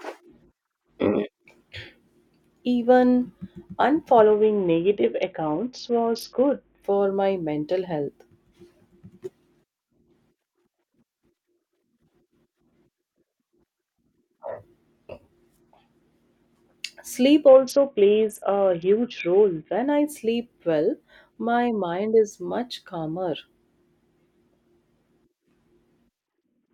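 Three Bluetooth SBC bit pool drops occur at 4.20–6.84 s, ending before "my mental health", at 17.48–19.85 s before "I sleep well my", and from 26.20 s to the end. Each time the speech turns dull and gritty, consistent with the encoder starving upper sub-bands near 60 kbps. A spectrogram shows treble vanishing abruptly, with grainy noise below.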